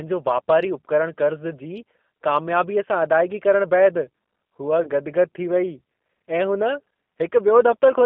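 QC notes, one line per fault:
Throughout: G.729 codec. The speech sits in a narrow telephone band of roughly 200 Hz to 3.5 kHz, with nothing audible above it. The character points to an 8 kbit/s G.729A stream. The coding damage is plainly audible as a rough, slightly synthetic texture. The decoder rebuilds each 10 ms frame from a vocal tract filter, a pitch predictor and a few pulses instead of the real waveform.
4.83 to 4.90 s: VoIP packet loss concealed by the speech codec. About 30 ms of audio is missing, which fits a single lost packet. The decoder fills the gap by repeating its last pitch and filter settings at falling gain, producing a brief smeared stretch instead of silence. Because each frame is predicted from the one before, the sound stays weak or distorted until about 4.90 s, after new packets resume.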